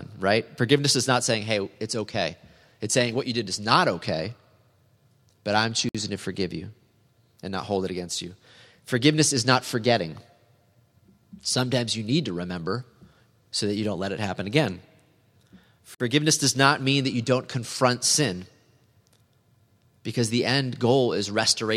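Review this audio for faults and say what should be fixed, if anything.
Two gaps at a join of encoded pieces interrupt the speech. One runs 5.89 to 5.95 s and one 15.95 to 16.00 s, each about 55 ms, ten seconds apart. The encoder delay and last-frame padding were left in at each join. Trim that padding, or encode the audio as one continuous piece.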